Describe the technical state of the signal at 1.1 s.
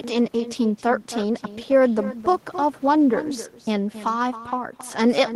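Echo with no canceller is present at 1.1 s, as it is across the whole clip. The far end is playing the call through a loudspeaker, its microphone picks that playback up, and nothing subtracts it before it travels back. The speech returns about a third of a second later, roughly 15 dB quieter, so each syllable is trailed by a faint, thinner copy that smears the moment.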